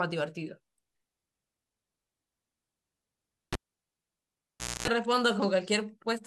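A live cable is pulled out and plugged back in from 3.53 to 4.88 s. A pop cuts the speech to near silence for about 1.3 s, during which a 250 ms burst of 60 Hz mains buzz sounds as the tip makes contact, and a second pop brings the sound back.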